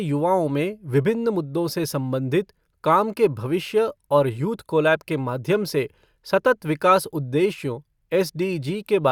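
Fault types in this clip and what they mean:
No faults heard in this recording.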